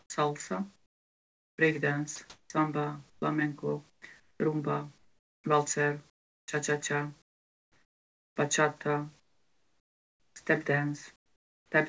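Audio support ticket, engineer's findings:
Speech chopped from 0.0 to 8.36 s, with about 3.6 s of it swapped for filler. Syllable edges and quieter bits vanish. Sound chopped by the voice detector is the likely cause, with the sender's VAD toggling transmission on and off and comfort noise filling each gap.

Comfort noise in place of the background at 9.20 to 10.36 s and 11.16 to 11.72 s. The real room tone gives way to flat, featureless hiss, about 16 dB and about 15 dB quieter respectively. Probably the sender stopping transmission in pauses, with the receiver synthesizing a rough stand-in for the background. Room noise otherwise sits about 41 dB under the speech, and the G.722 path tops out at 8 kHz.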